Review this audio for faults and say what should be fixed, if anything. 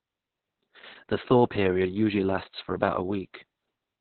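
Opus voice compression affects the whole clip. Speech sounds muffled, hoarse and faintly robotic because the SILK coder squeezes it into narrowband and codes the excitation coarsely, which fits a bitrate near 6 kbps. A spectrogram shows a hard empty ceiling above 4.3 kHz throughout. To prevent it, encode at a higher bitrate so Opus keeps wideband or fullband audio.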